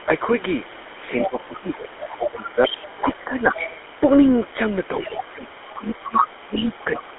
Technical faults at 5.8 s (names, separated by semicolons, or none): GSM full-rate codec; speech suppressed in double talk; other side's voice leaking through